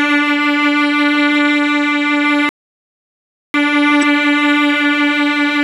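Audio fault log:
throughout  doubled audio track: A second, full-band copy of the music runs around 150 ms behind the first, at roughly equal level, so every attack is heard twice as a flat slap. Unlike an echo or reverb it does not decay and adds no room colour; the copy is identical and simply offset. This likely comes from the same audio being mixed in twice, with one copy reaching the mix by a slower path.
throughout  MP3 compression: The treble is cut off and the upper detail has a watery, swirling quality, with metallic chirps on bright transients and smeared attacks. A plain low-pass filter would sound dull but steady. Here the weak frequency components switch on and off from frame to frame, which gives the shimmer. The damage is plainly audible and likely comes from MP3 encoding at a low bitrate, which fits around 64 kbps.
2.49–3.54 s  playback stall: The music stops mid-flow and the output is silent for about 1.05 s before sound returns. 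A brief dropout lasts only milliseconds. This gap is long and completely silent, with no glitch or noise filling it, which points to the player running out of data or being blocked until it recovered. That is likely what caused it, and the music then carries on after the pause.
3.99–4.04 s  damaged data in a compressed stream: A short glitch of about 44 ms cuts into the music. It differs from the stall just before it because it is far shorter. Corrupted bytes in the compressed stream made the decoder misread those frames and lose sync until it found the next valid frame header. The result is heard as this brief glitch.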